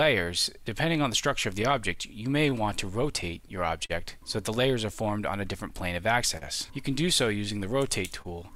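Clock drift between sender and receiver runs through the whole clip. The sender's clock is a few percent slow, so the receiver's jitter buffer keeps draining. The result is a faintly unsteady pace with small hiccups at uneven intervals. On a waveform the envelope looks subtly stretched.

From 0.03 to 1.98 s there are scattered short gaps, around seven of them. The longest is only about 15 ms. Each lost or late packet was patched by continuing the preceding sound, giving brief ticks or smears. On a spectrogram these appear as tiny flattened slivers where the texture briefly freezes.

Repeated timing corrections span 0.25 to 7.88 s. The receiver plays at 99% speed, inserting repeated slivers that add roughly a tenth of a second overall. They are unevenly spaced. A waveform shows occasional duplicated cycles, with spectral frames repeated across the stretch.

Between 3.22 and 3.91 s come more scattered short gaps, about three, the longest around 40 ms. 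Each was patched by continuing the preceding sound. On a spectrogram each shows as a short horizontal band of smoothed, repeated content where detail drops out.

A short stall from a late packet occurs at 6.37 to 6.43 s. The jitter buffer ran empty and the receiver held the last sound for 38 ms before resuming where it left off. The held sound comes with a slight buzz or dip. The waveform shows a repeating, periodic stretch, and the spectrogram a brief frozen column.

A second stall follows at 8.22 to 8.27 s, with 29 ms filled by stretching the last sound. Nothing is lost, but it lingers briefly with a slight buzz or dip. It is visible again as a short, unnaturally static patch in the spectrogram.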